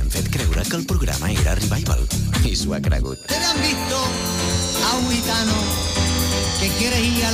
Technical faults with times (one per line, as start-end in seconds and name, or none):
none